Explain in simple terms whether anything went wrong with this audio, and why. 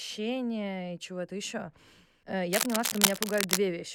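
Something did go wrong: from 2.53 to 3.57 s there's cable scratch noise, a rough, crackly rustling about as loud as the speech itself. It's likely a worn cable or connector being moved, so the contact keeps flickering and spits out bursts of noise.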